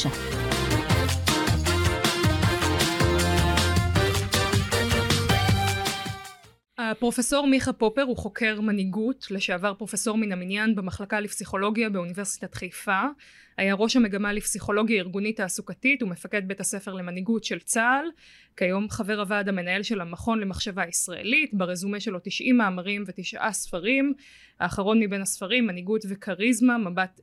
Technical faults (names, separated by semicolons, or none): none